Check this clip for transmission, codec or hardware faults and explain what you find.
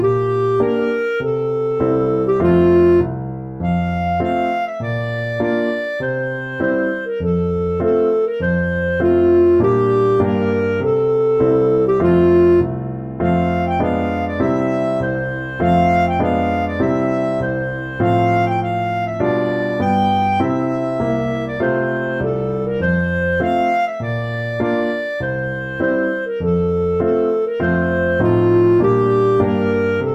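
Nothing here points to a transmission, codec or hardware problem; I listened all the way and there's no fault to report.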